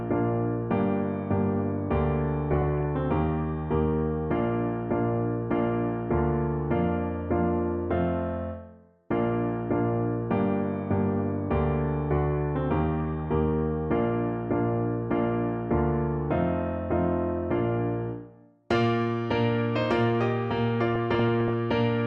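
Three short bursts of DAB burbling break up the audio at 2.52 to 2.85 s, 13.05 to 13.25 s and 20.93 to 21.53 s, heard as burbling over the programme. Weak reception lets a small fraction of a percent of bits slip past error correction. Corrupted samples then put short blips of noise in single sub-bands, and corrupted scale factors make individual sub-bands leap in level for up to a frame. A spectrogram shows scattered rectangular blocks flaring in isolated frequency bands, and the waveform shows brief, jagged level jumps.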